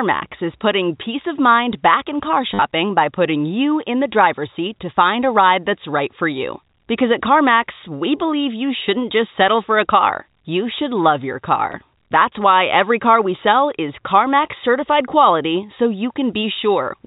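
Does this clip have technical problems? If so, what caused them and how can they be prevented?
Yes. Packet loss with last packet repeated occurs twice. Packets were dropped between 2.54 and 2.62 s, with the longest unbroken gap about 50 ms, and again at 11.72 s. Each time the receiver replayed its previous packet to fill the gap. The repeats seldom line up with the pitch, and the first run becomes a brief robotic stutter whose buzz points to 10 ms packets. A jitter buffer with proper packet loss concealment, or forward error correction on the link, would prevent it.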